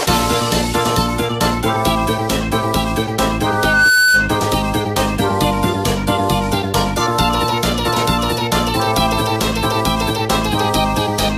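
A microphone was picking up the loudspeaker it was feeding, and at 1.5 kHz the gain around that loop went above one, so the audio suffers a loudspeaker feedback squeal from 3.46 to 4.39 s. The tone reinforces itself on each pass, swelling over just under half a second into a steady whistle that ends up roughly 5 dB above the rest of the sound before it cuts off at 4.39 s.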